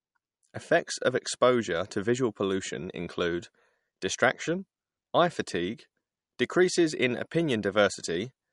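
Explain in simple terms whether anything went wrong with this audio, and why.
Yes, something went wrong. From start to finish the speech sounds dull and muffled, with nothing above about 11.1 kHz. This is likely low-bitrate audio saved at a high bitrate: heavy MP3 compression removed detail, and re-saving it in better quality couldn't restore it.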